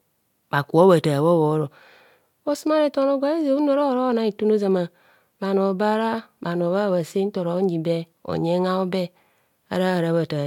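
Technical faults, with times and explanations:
No technical faults can be heard in this speech recording.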